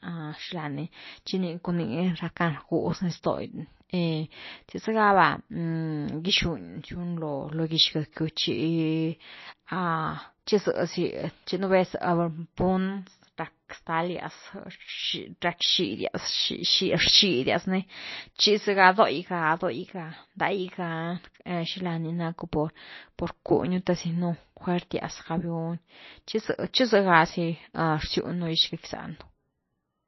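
A speech recording with MP3 compression damage from start to finish. Nothing is heard above 5.8 kHz. The treble stops at that fixed cut-off, so s sounds lose their edge. The damage is plainly audible. Weak frequency components drop in and out from frame to frame. That gives a watery, swirly texture, and attacks are smeared. The sound points to an encoder starved of bits, which fits a bitrate of about 27 kbps. MP3 is the likely cause.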